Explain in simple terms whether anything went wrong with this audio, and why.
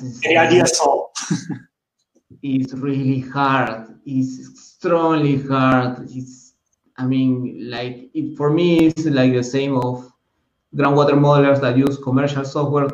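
There are periodic USB or driver dropouts: roughly every 1.02 s, from 0.61 s to 12.90 s, a tiny sliver of audio, around a millisecond, is skipped. A background task briefly stalls the audio connection, causing regular ticks wherever sound is present.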